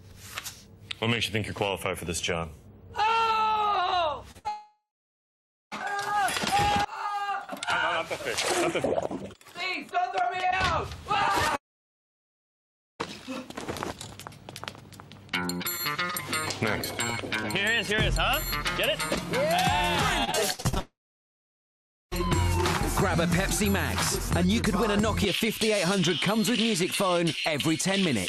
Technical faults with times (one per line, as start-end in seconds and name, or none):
4.31-5.80 scattered short gaps
4.48-5.73 long network dropout
11.56-13.01 long network dropout
20.24-22.16 repeated packet loss (robotic sound)
20.80-22.13 long network dropout